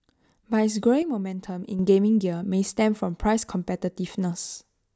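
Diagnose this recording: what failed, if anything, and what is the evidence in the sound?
A sudden gain jump runs from 1.02 s to 1.79 s. The speech and the background noise drop together by about 7 dB in a single step, hold at that lower level, then step straight back up at 1.79 s. Because the noise floor moves with the speech, the change happened after capture, in the digital path. The likely cause is a gain setting or bit shift applied in the processing stage without any ramp.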